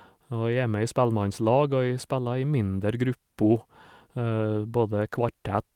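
No technical faults can be heard anywhere in this speech recording. There is nothing to place on a timeline.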